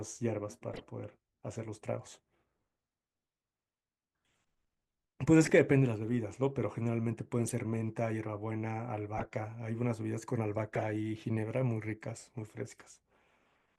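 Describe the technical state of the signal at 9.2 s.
A corrupt frame decoded runs from 9.17 to 9.26 s: a few damaged compressed frames were played anyway, spraying misplaced spectral energy as a brief burst peaking about -25 dBFS.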